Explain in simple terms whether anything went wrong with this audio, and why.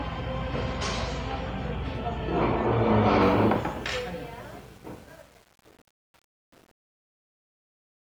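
Truncation distortion on a fade spoils the ending. From 3.22 s the fade-out turns gritty, and from 3.48 s to 8.05 s it is at its worst, which fits an 8-bit volume stage rounding the shrinking level into coarse steps. Steady hiss would stay constant, but this grit worsens as the sound gets quieter.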